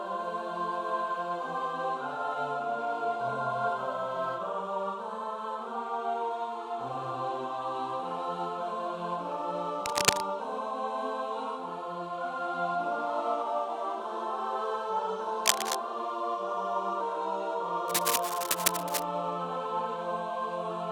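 Cable scratch noise breaks in three times: from 9.86 to 10.21 s, from 15.46 to 15.75 s, and for the longest stretch from 17.88 to 19.03 s. It is a harsh, uneven scratching laid over the sound. It is louder than the signal in the first two bursts and about level with it in the third. The likely cause is a worn lead or connector being moved. On a spectrogram each burst is a dense, ragged broadband smear, and on the waveform it shows as spiky, irregular hash.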